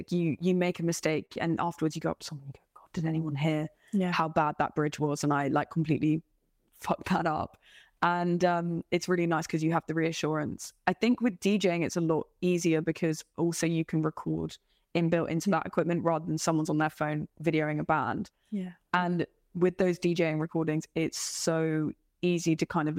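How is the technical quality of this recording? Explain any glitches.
Three network glitches are audible in the speech, two close together near the start and one about halfway through.

At 1.25 to 1.31 s there is a short stall from a late packet. A packet missed its playout time and the jitter buffer ran dry, so the receiver stretched the last bit of sound for 38 ms until the packet arrived and then carried on where it left off. No speech is lost, but a sound hangs a little too long with a faint buzzy dip, and everything after it plays 38 ms later.

Just after that, at 1.33 to 1.37 s, comes a short concealed packet loss. About 20 ms of audio never reached the decoder, and the receiver covered the gap with 22 ms of synthesized continuation before blending back into the real signal. It comes across as a brief smear or wobble right on the heels of the stall, and a short consonant could disappear inside it.

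At 13.03 to 13.51 s the jitter buffer speed-up kicks in. The buffer had built up more audio than its target, so the receiver trimmed tiny pitch-period slices repeatedly to reduce the delay, removing roughly 40 ms overall. For about half a second the speech plays at 107% speed with unchanged pitch, sounding slightly rushed.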